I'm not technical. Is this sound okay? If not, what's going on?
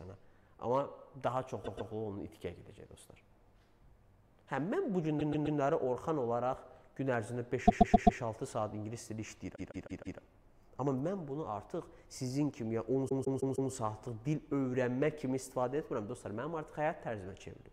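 No, it has repeated frames: short snippets of about 0.13 to 0.16 s replay back to back, stuttering at 1.63, 5.19, 7.67, 9.55 and 13.08 s.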